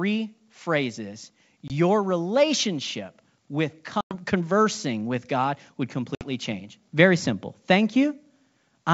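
Packet loss on an ADPCM call leaves hard-edged silent gaps at 1.68–1.72 s, 4.01–4.15 s and 6.15–6.24 s, losing 20, 100 and 60 ms. Afterwards the decoder's predictor and step size no longer match the sender's, so the speech returns with some distortion.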